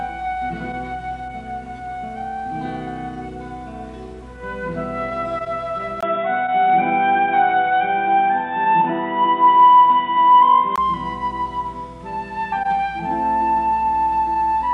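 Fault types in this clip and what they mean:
Input switched to a poorer device: From 6.01 s to 10.78 s the sound turns dull and boxy, with nothing above 3.8 kHz, a short 20 ms gap at the switch, a faint new noise floor and a noticeable level jump, likely a change to a lesser input.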